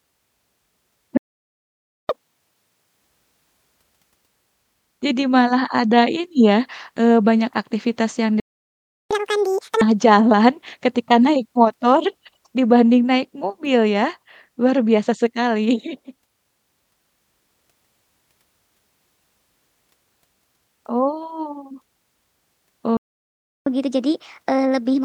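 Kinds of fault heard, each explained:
playback stall: The speech cuts out mid-flow, silent from 1.17 to 2.09 s, 8.40 to 9.11 s and 22.97 to 23.67 s (0.92, 0.71 and 0.69 s), likely because the player ran dry or its thread was blocked. The waveform flatlines, and the spectrogram shows blank vertical bands.
catch-up at higher speed: After each stall the player races through its backlog by resampling. Speech runs at 2x, pitch up roughly ten semitones, from 2.09 to 3.01 s and 9.11 to 9.81 s. It runs at 1.25x, about four semitones up, from 23.67 s to the end. Spectrogram harmonics shift upward, time-compressed.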